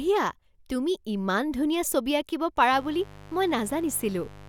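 At 2.72 s a mains buzz kicks in and runs right to the end of the speech. It sounds like a steady, raspy drone rather than a clean hum. Something like a dimmer, a rectifier or a missing shield is letting sharp switching spikes leak in twice per cycle of the 50 Hz supply. That gives harmonics of 50 Hz stacked up into the kilohertz range. It sits roughly 20 dB under the speech.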